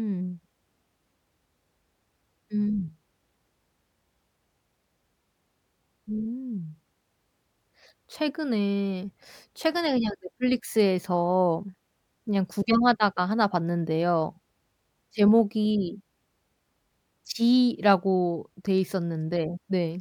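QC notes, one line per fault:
0.19–19.86 s, clock slip clicks: faint regular ticks recur about five times a second, around a hundred across the speech, clearest on loud sustained sounds and absent in pauses. The likely cause is two devices running on unsynchronised clocks differing by roughly 100 ppm, so the accumulated drift forces a single sample to be dropped or repeated about every fifth of a second. Each slip breaks the waveform's continuity, producing the tick.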